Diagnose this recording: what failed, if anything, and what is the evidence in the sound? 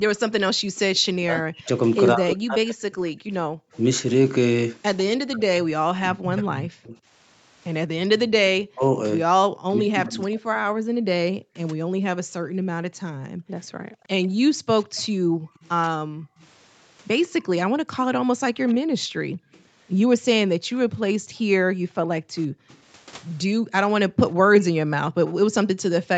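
Background gated by the echo canceller, 0.55–3.72 s and 9.48–24.11 s: at the call-processing stage, the room sound drops by up to about 40 dB while the far end plays, for roughly half a second in the first span and about five seconds in the second. The canceller clamps the microphone and releases afterwards.

Echo leak, 0.76–5.02 s and from 13.64 s to the end: a faint copy of the speech follows 147 ms behind, about 25 dB below the speech at first and about 30 dB below later. It is likely residual loudspeaker pickup that the echo canceller failed to subtract and sent back.

Speech suppressed in double talk, 1.21–12.4 s: the talker's speech dips by as much as roughly 40 dB, totalling about four seconds, while both sides speak at once. The likely cause is the echo canceller mistaking near-end speech for echo and attenuating both.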